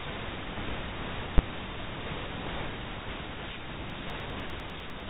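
Speech, band-limited by G.711 telephone coding so that nothing above about 3.8 kHz passes, carries two faults. At 1.38 s there is a single loud bang from invalid numbers at full scale. A calculation produced infinite or invalid values that were clamped to the maximum sample value for a block of about 10 ms. Because the block is so short, the pop at its start and the pop at its end merge into one hard click. From 3.90 s to 5.00 s there are periodic USB or driver dropouts. A regular tick is heard every 0.1 s, about ten in all. Each one is a gap of only a small fraction of a millisecond where the audio was replaced by silence, which fits a background task stalling the bus or driver at a fixed interval. The ticks are audible because they cut into the speech signal.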